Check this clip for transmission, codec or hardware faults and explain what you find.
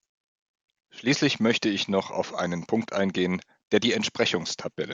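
Nothing wrong turns up here; the speech comes through steady and intact, with no transmission, codec or hardware trouble to point to.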